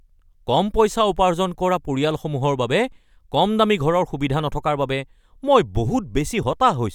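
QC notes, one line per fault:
No faults heard anywhere in this speech recording.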